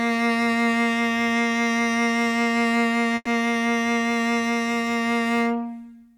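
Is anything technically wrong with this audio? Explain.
Yes. From 3.15 to 3.28 s the music stops and a fading buzz fills about 110 ms, ending in roughly 20 ms of silence, then resumes where it left off. This call audio freeze likely comes from delayed packets draining the jitter buffer, adding 110 ms of delay.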